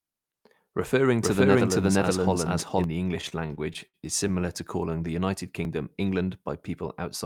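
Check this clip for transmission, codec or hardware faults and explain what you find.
Two faults are audible in this speech.

From 1.22 to 2.84 s, a second capture path or out-of-step edit likely mixes in a doubled audio track: an equally loud, dry copy about half a second late, starting and stopping abruptly.

From 3.21 to 4.50 s, late packets repeatedly drained the jitter buffer, causing stutter: about 0.2 s of stretched sound across short stalls up to 64 ms, with nothing lost.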